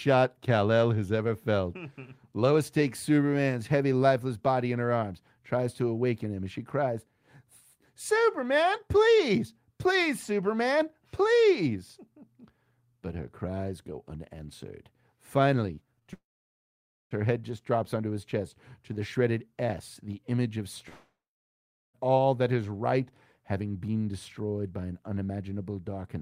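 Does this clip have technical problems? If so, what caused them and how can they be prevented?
Yes. Short concealed packet loss occurs at 15.75 to 15.79 s, 15.99 to 16.03 s and 16.03 to 16.07 s. Each time, about 20 ms of audio arrived too late, and the decoder bridged the gap by extending the preceding sound. The result is brief smears or wobbles with no silence, which sets these apart from a dropout. A larger jitter buffer combined with forward error correction would prevent them.

A long network dropout occurs at 16.13 to 17.13 s, just before "her head just drops", and again at 20.89 to 21.96 s, between "the image of" and "all that is right". Each time about a second of audio is lost. A short fading continuation gives way to roughly 0.9 s and 0.8 s of silence, and the audio then resumes with the missing part gone. The likely cause is an interrupted network connection. A stable wired or stronger connection would prevent it.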